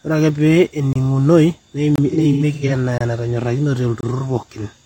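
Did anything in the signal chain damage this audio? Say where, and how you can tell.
Yes. The speech drops into brief, hard-edged silences at 0.93, 1.96, 2.98 and 4.01 s, each about 25 ms, spaced about 1.03 s apart. That regularity points to a gap between chunks at the storage or playback stage, with each one-second block starting late or padded.

From 2.10 to 2.72 s the speech turns smeared and noisy in patches, with roughly 300 ms lost across that span and the longest run around a tenth of a second. This is AAC frame loss with concealment: the decoder patched missing frames from the last good spectrum.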